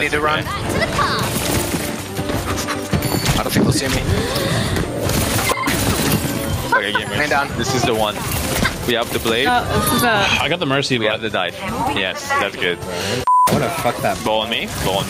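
Throughout the clip, the gain swings by about 15 dB, so loud and soft parts sit squashed close together. This gain pumping likely comes from input gain set far too high, with a fast limiter clamping down on every peak.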